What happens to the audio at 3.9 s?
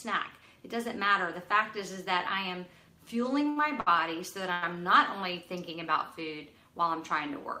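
Right around there you get a short stall from a late packet, running from about 3.80 to 3.88 s. A packet didn't show up on time, so the jitter buffer emptied and the receiver stretched the last bit of sound to cover roughly 63 ms until it arrived. Playback then picks up exactly where it left off, so nothing is lost, but that sound hangs a touch too long with a faint buzz or dip, and everything after it runs about 63 ms later.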